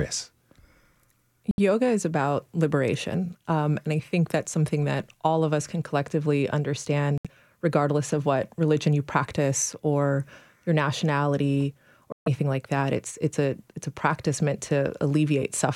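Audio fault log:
1.51–1.59 s, 7.18–7.27 s, 12.12–12.28 s, Bluetooth dropout: packets likely arrived late and were dropped, cutting the speech to silence for about 70, 70 and 140 ms before it resumes further along.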